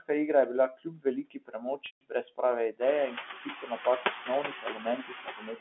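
Noise suppressor artifacts run through the whole clip: the suppressor pulls the steady background down by only about 4 dB frame by frame.

Speech cut by the noise suppressor first appears from 0.70 to 1.06 s, just after "je bila". The suppressor mistakes quiet speech for noise and dips it by up to about 18 dB, so word edges sound swallowed. The same happens from 1.23 to 2.41 s, with drops of about 21 dB across roughly two-thirds of a second.

Within that stretch, packet loss with pitch repetition hits from 1.86 to 2.01 s. About 150 ms of audio is missing, which fits around fifteen lost packets. The receiver repeats the last pitch period, so the sound holds as a buzzy tone, fades to silence, then cross-fades back in.

The suppressor cuts speech again at 2.72 to 2.81 s, by about 21 dB, and from 3.10 to 3.80 s, by about 16 dB, after the room noise swells near 3 s. The final cut runs from 4.01 s to the end, with drops of about 20 dB over roughly a second in total. 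The telephone-band G.711 coding holds everything to the narrow line band.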